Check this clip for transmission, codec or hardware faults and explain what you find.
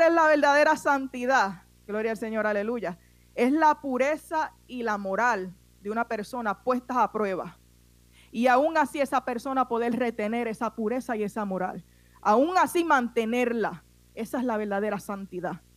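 There's one fault here, and it runs through the whole speech clip: video or display buzz. A screen or video cable is leaking into the audio path, giving a steady buzz at the 59.94 Hz field rate with hash above it, plus a thin whine near 15.7 kHz from the line rate, sitting roughly 30 dB under the speech.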